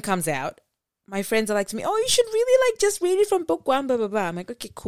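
From the start to about 2.9 s the speech carries sample clock jitter: the converter's timing wanders by around a microsecond, so each sample lands slightly early or late and picks up an error proportional to how fast the waveform is changing. The result is a fine hiss or grain sitting roughly 35 dB below the signal, strongest on loud passages and sibilants, and absent in the gaps.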